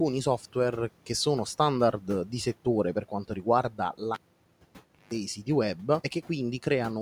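From 3.7 to 4.01 s, the noise suppressor cuts into the speech. It mistakes some quiet speech for background and pulls it down by up to about 10 dB, for roughly 150 ms in all, so those bits sound swallowed and faint.

Right after, at 4.14 s, you get a classic cable pulled and plugged in. There's a pop, then nearly a second of near silence (about 940 ms) while the lead is out, then a 160 ms burst of 50 Hz mains buzz as the tip makes partial contact. A second pop comes as the sound returns at 5.13 s. The room noise, sitting about 24 dB under the speech, drops out with everything else during the gap.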